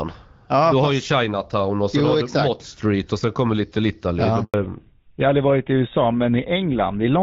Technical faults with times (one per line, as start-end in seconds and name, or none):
4.44-4.54 handover gap
4.54-7.22 fallback to narrowband